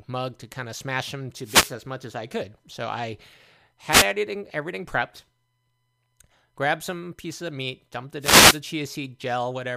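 Wireless microphone noise hits occur at 1.42 to 1.75 s, between "kind of smash them" and "as much as I", at 3.89 to 4.07 s, just before "everything everything prepped", and at 8.20 to 8.61 s, after "pieces of meat dumped". Each is a brief swish of static lasting a fifth to two-fifths of a second. The FM radio link dips as reflected signals cancel at the receiver, and its noise floor rises.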